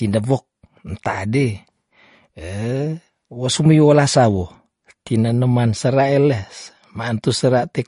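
Speech with plainly audible MP3 compression throughout: nothing above 10.5 kHz and watery, swirly artefacts, likely from a low bitrate around 40 kbps.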